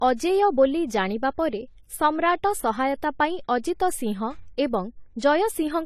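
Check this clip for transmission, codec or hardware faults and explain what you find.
One fault runs through the whole speech clip: low-bitrate audio saved at a high bitrate. Nothing is heard above 14 kHz. The thin, smeared detail points to an earlier very low-bitrate pass, such as 32 kbit/s AAC. It was likely re-saved later as a larger MP3. The second encoding cannot restore what was lost.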